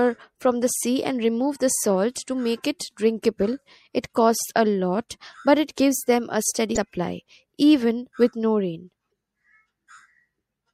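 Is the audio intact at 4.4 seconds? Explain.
No. At 4.40 s there is damaged data in the compressed stream: corrupted bytes make the decoder misread a frame, lose sync and hunt for the next header. The result is a brief glitch just before "a lot but it".

Throughout, the sound has plainly audible damage, likely from MP3 compression at a low rate that fits a 64 kbps encode. Bits run short, so weak frequency lines flicker on and off, giving a watery, swirly texture, metallic chirps on s sounds and smeared attacks.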